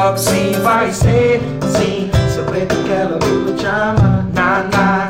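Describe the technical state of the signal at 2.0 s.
At 2.0 s you're inside a stretch of channel delay, which gives comb filtering, running from about 0.75 s to the end. One side lags by a couple of samples, so summing to mono cancels near 10 kHz and leaves the top sounding dull.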